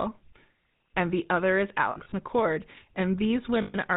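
Right from the start the whole clip carries the sound of the GSM full-rate codec, and the damage is plainly audible. The speech has that buzzy, gravelly texture you get when the vocal tract is modelled and fed with regularly spaced pulses instead of the real excitation. Nothing gets through above 4 kHz, so it's dull as well as rough. That points to the old 13 kbps full-rate coder.

From 1.92 to 2.14 s you get lost GSM frames. The gaps are spread across about 200 ms, adding up to about 100 ms of missing audio, which fits around five dropped 20 ms frames. No single hole runs longer than a few tens of milliseconds. Each gap is filled by repeating the last good frame, so you hear short, rough, metallic smears rather than silence.

From 3.62 to 3.76 s there's a second loss of about 120 ms, which suggests around six lost frames. This time the repeated frame comes through as a metallic ring.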